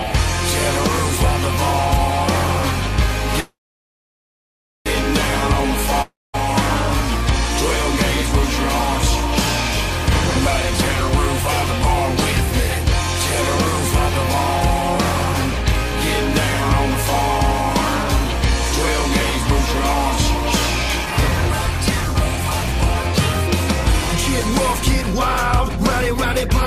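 A call audio freeze runs from 3.40 to 4.88 s. The sound trails off into a short fading buzz or hiss, then about 1.33 s of silence, before resuming exactly where it left off. The likely cause is packets held up in transit until the jitter buffer ran dry. The receiver filled the wait with a decaying continuation of the last sound. Nothing is lost, but the playback now runs about 1.45 s behind.

A long network dropout follows at 6.02 to 6.36 s. The last sound is stretched into a brief fading buzz or hiss, then roughly 0.22 s of silence. When the sound returns it has jumped ahead, with about 0.32 s of audio missing. The likely reason is that no packets arrived for that stretch, and they were never played.

A jitter buffer speed-up runs from 15.51 to 26.49 s. Playback is about 104% of normal speed, at unchanged pitch. The buffer was holding more audio than its target, so the receiver repeatedly cut out tiny pitch-period-sized pieces. 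In total it removed around half a second to bring the delay back down.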